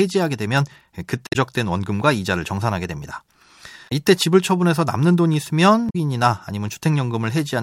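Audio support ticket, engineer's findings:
Short blips at 1.24–1.36 s, 3.85–3.92 s and 5.86–5.96 s, each roughly 0.07 to 0.12 s long, cutting briefly through the speech. Probable component: compressed stream or file. Mechanism: damaged data in the compressed stream; the decoder misreads corrupted frames, loses sync and scans for the next valid frame header before playback recovers. Check the source file and transport for lost or overwritten bytes.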